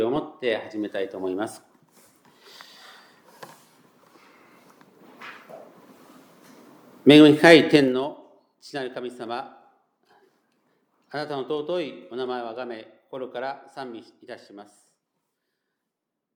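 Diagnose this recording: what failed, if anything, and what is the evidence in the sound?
Zipper noise at 7.72–8.08 s: unsmoothed buffer-stage gain drops about 15 dB in 2 dB steps, roughly thirty a second, leaving a staircase envelope and vertical spectrogram ticks.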